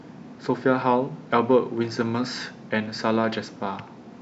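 At 0.82 s the speech stream most likely skipped a single sample, a gap of only a tiny fraction of a millisecond. This is a case of dropped samples: the waveform leaps straight from one value to a later one instead of moving smoothly between them. Nothing audible is removed, but the abrupt step produces one sharp click, which shows up in a spectrogram as a thin vertical line across the frequency range.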